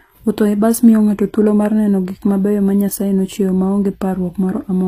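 Throughout, the speech has gritty, metallic sibilants and a synthetic-sounding treble with nothing above 15.5 kHz, likely HE-AAC compression rebuilding the upper band by replication, which fits roughly 24 kbps.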